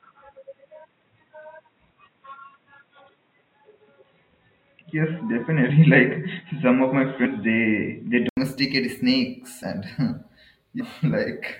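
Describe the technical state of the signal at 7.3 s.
At 7.3 s you're in the muffled stretch that runs from the start to 8.37 s. Nothing gets through above 3.8 kHz, so it sounds dull and boxy, with a faint noise floor about 50 dB down and no real level jump. That's likely an input switched to a poorer device, such as a headset's call profile. At 8.37 s there's an 80 ms gap before the sound opens up again.

Just before your moment, from about 7.25 to 7.27 s, compressed frames were skipped. A handful of frames, roughly 150 ms of audio, never got played, so the sound jumps ahead.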